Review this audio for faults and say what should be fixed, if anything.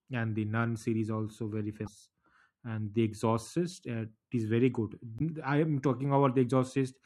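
Damaged data in a compressed stream causes brief glitches at 1.84–1.88 s, after "nun series also very", and at 5.17–5.21 s, between "is very good" and "i am". The decoder misreads corrupted frames and resyncs. Verify stream integrity with checksums and retransmit or re-encode damaged segments.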